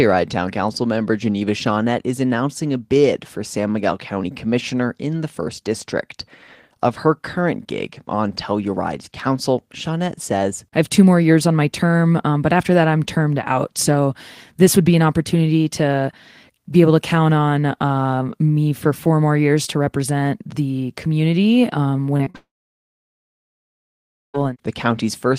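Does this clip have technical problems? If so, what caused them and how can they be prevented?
Yes. Short concealed packet loss occurs at 22.17–22.21 s, 22.25–22.28 s and 22.30–22.36 s, just after "represent the community um". Each gap is 20 to 40 ms of speech that arrived too late, which the receiver patched by extending the preceding sound. The result is brief smears and wobbles. A larger jitter buffer with forward error correction would cover gaps this short.

A long network dropout runs from 22.36 s to 24.36 s. The concealed tail fades quickly, leaving about 1.9 s of near silence. Speech then resumes with the missing stretch gone. The likely cause is a brief loss of the network connection. A stable wired link, or a connection with redundant paths, would prevent it.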